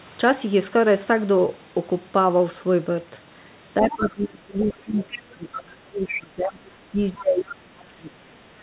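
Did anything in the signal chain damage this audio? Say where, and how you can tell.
Yes. The damage sits in call processing, in the echo canceller. The speech is suppressed in double talk from 3.8 to 5.12 s and again from 5.33 to 8.4 s. The level sags by up to about 20 dB, then about 30 dB, for roughly four and a half seconds in total. The likely cause is the canceller ducking the near talker while the far end was active.

At the same stage, the other side's voice leaks through in short scraps at 3.9 to 4.06 s, 4.6 to 4.73 s, 5.11 to 5.19 s and 6.07 to 6.22 s. These scraps sit about 20 dB below the speech at first and rise to about 10 dB below. This is likely loudspeaker echo the canceller left in the microphone signal.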